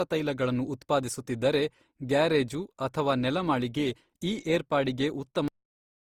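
Throughout, the speech sounds swirly, smeared and hollow, with blurred attacks, though content reaches about 20.3 kHz. This is likely generation loss: the audio was lossily re-encoded about four times, which fits Opus at around 48 kbit/s, with each pass adding fresh quantisation noise and spectral holes.

At 5.48 s the sound stops abruptly mid-sound and drops straight to digital silence with no decay, remaining silent for the last half second. This is a cut-off end: the final buffers were never written or played out.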